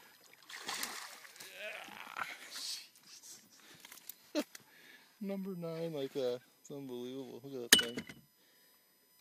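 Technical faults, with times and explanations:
Throughout, USB whine: a steady whine of fixed pitch runs beneath the audio, based on 1 kHz with its strongest component high up at 13 kHz, roughly 30 dB below the signal. The bus's 1 ms frame rhythm leaks current pulses through power or ground, producing this harmonic series.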